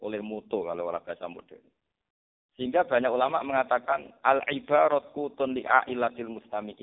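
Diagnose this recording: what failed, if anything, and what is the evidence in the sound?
The codec stage failed: the speech went through an AMR narrowband mobile codec at a very low rate, which points to the 4.75 kbps mode. Throughout, nothing passes above 3.7 kHz, the line band sits at 300 Hz to 3.7 kHz, and the heavy damage gives the voice a buzzy, synthetic quality.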